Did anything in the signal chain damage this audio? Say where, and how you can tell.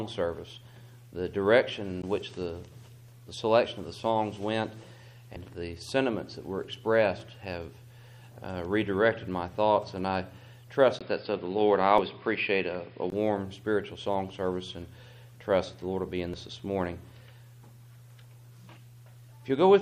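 Yes. The codec or storage stage shows damaged data in a compressed stream. Brief blips land at 2.02, 5.36, 11.98 and 16.34 s. Each is a short disturbance of 4 to 18 ms. That pattern means corrupted bytes in the compressed file. The decoder could not read those frames. It lost sync and jumped to the next valid frame header.

The capture stage changed devices. From 10.99 to 13.12 s the input switched to a poorer device. The switch opens with about 20 ms of silence. Then everything above 5.1 kHz disappears and the sound turns dull and boxy. A new noise floor sits roughly 55 dB below the signal. The level hardly changes. The likely cause is the system moving to another microphone or a headset call profile, then switching back.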